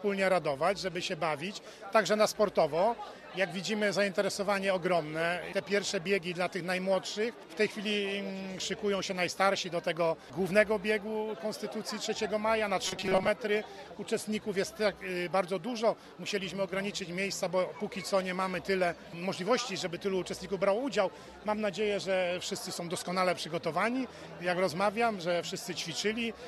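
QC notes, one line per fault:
12.85–13.28 s, robotic sound from repeated short buffers: rigid metallic buzz at 188 Hz, likely a 5.3 ms buffer repeated across most of the span.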